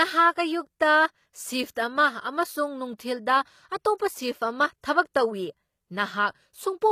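Throughout the speech, the upper spectrum is likely rebuilt by HE-AAC compression, which fits a low bitrate of around 24 kbps. The treble is synthesised from copied lower bands, so sibilants sound gritty and lispy, the damage is plainly audible, and nothing sounds above 14.9 kHz.

At 1.75 s and again from 5.13 to 5.15 s, the codec spreads quantisation noise across a whole block ahead of a sharp attack. This causes pre-echo: a short hiss about 18 and 24 ms long precedes each onset, which sounds softened and smeared.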